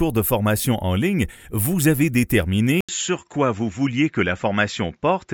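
An input switch to a poorer device, heard at 2.81 s and lasting to the end, starts with a gap of about 80 ms, after which the audio loses everything above 7.6 kHz and turns duller and more boxed-in, with a new, faint noise floor roughly 50 dB down, while the level stays about the same. The likely cause is the recording input changing mid-take to a narrower-band microphone or a headset's call profile.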